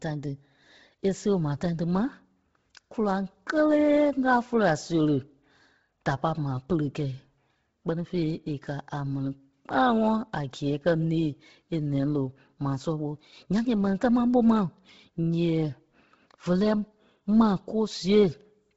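Throughout, the speech sounds heavily grainy and breathy, and a spectrogram shows nothing above 7.7 kHz, with noisy fill in the upper band. This is likely Bluetooth LC3 compression at a low bitrate, which fits 16 kbps with 10 ms frames.

From 0.75 s to 18.12 s, faint regular ticks recur about every 0.7 s, around thirty in all. These are clock slip clicks, likely from unsynchronised clocks drifting apart by some tens of ppm. Each is a one-sample step visible in the waveform.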